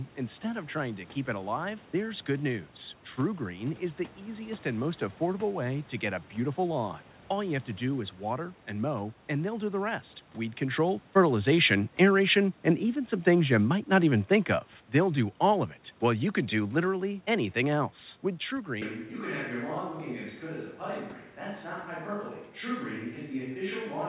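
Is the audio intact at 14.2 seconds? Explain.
No. Automatic gain falling runs from 11.15 to 14.59 s, just after "the rest weed control": the gain control hears input too loud or background noise too strong and eases it down about 5 dB, so speech and background sink together.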